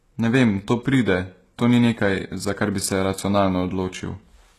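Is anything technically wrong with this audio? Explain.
Yes. Throughout the speech there is plainly audible codec damage, likely HE-AAC compression: nothing above 12.3 kHz, and replicated treble makes s sounds gritty and metallic, which fits a bitrate near 16 kbps.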